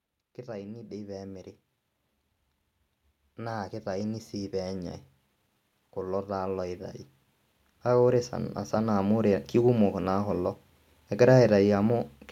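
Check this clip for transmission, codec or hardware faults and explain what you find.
One kind of fault appears: automatic gain rising, three times. From 0.45 to 1.51 s, 3.22 to 4.82 s, and 7.69 to 9.35 s, just before "kekumok naa kulo", the gain control judges the input too quiet and raises level by about 5, 6 and 5 dB. Speech and background swell together.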